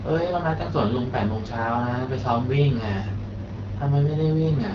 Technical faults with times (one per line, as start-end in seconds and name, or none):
0.00-4.75 AMR wideband (HD Voice) codec